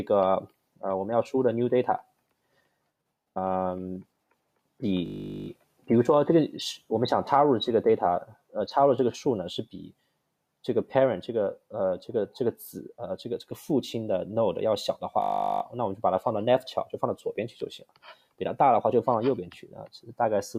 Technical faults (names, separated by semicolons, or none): system hang loop